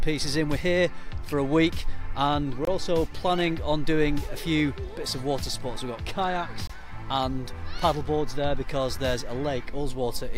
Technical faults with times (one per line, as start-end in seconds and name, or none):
2.65-2.67 gap between chunks
6.67-6.70 gap between chunks